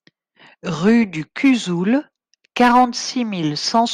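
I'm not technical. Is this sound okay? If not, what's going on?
Yes, nothing wrong can be heard in this recording at any point.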